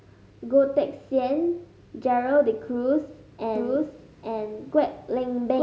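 Speech, with a doubled audio track from 3.56 s to the end. A second full-band copy, about as loud as the original, trails by roughly one second and cuts in abruptly, with no decay or room colour, most likely from a slower second capture path.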